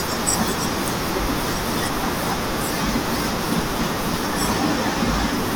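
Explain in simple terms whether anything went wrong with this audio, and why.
Nothing went wrong: the speech comes through intact, with no dropouts, glitches or distortion to point to anywhere in the recording.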